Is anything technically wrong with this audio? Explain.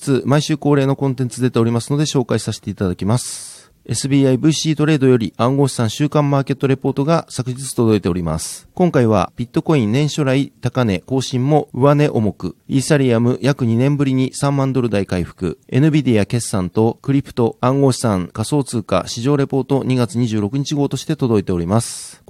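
No, nothing technically wrong stood out on listening to this speech recording.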